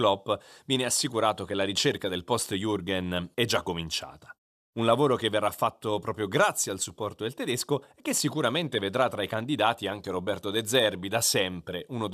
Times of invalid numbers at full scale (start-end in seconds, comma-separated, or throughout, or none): none